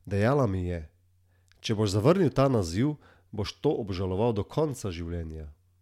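Listening through the speech recording, nothing technical stood out.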